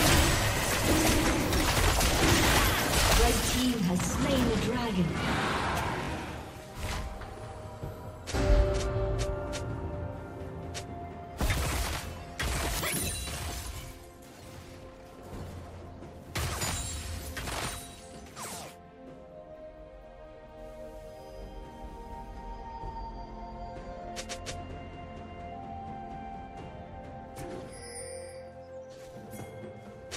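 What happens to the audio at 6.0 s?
At 6.04 to 6.10 s there is a Bluetooth stutter. Packets arrived late or not at all, so the receiver replayed its last short slice of sound rather than going quiet, and the repeats make a brief buzzy, machine-gun flutter. About 43 ms of sound goes missing, which points to a couple of lost packets. Unlike a dropout, there is no gap of silence. Afterwards the audio picks up further along, as if it had kept playing underneath.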